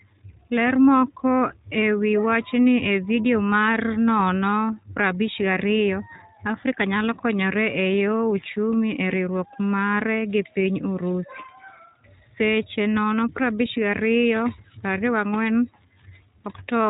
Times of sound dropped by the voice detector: none

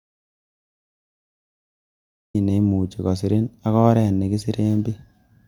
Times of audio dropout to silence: 0.00-2.34

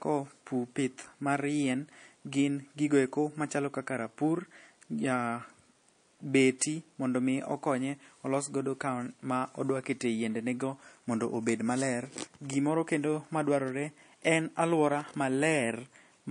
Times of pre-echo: 6.59-6.61

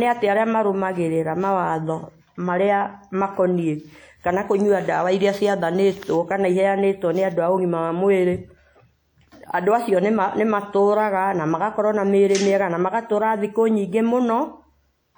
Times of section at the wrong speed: none

